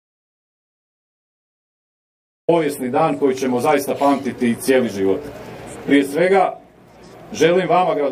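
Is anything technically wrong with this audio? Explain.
Yes. From the very start until 2.48 s there is an audio dropout to silence that is already under way when the clip begins. The input was likely lost for that stretch, through a disconnected device, a failed link or a mute, while the recorder kept writing silence. What you hear is silence with no room tone at all, and then the sound arrives abruptly mid-flow at 2.48 s. Whatever happened during that gap is gone.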